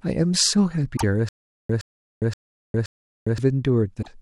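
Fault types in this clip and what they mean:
damaged data in a compressed stream: corrupted frames make the decoder lose sync, heard as brief blips at 0.93 to 1.04 s and 3.99 to 4.08 s.
stutter with silent gaps: from 1.29 to 3.38 s, a 118 ms burst repeats four times, each followed by 406 ms of digital silence, likely from a stalled player retrying.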